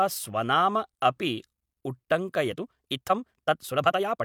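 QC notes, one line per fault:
2.45–4.24 s, time-stretched section: from 2.45 s to the end, the speech suddenly runs about 1.66 times faster, yet its pitch does not rise. The pace jumps at once, with no gradual change. The sound turns rushed. This is likely software squeezing the audio to fit a shorter length, dropping short slices so the pitch is kept while the timing is compressed.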